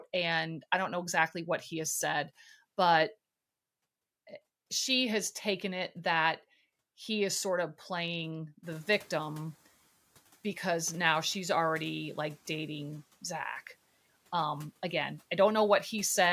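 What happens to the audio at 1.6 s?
Nothing goes wrong at 1.6 s; the speech there comes through intact, with no dropout, glitch or distortion.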